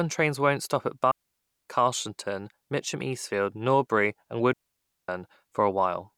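Digital wireless dropouts at 1.11 to 1.66 s and again at 4.53 to 5.09 s, each about 0.55 s long: the receiver lost too much data from the link and muted quickly, leaving a clean hole of near silence in the speech, with no noise burst on either side.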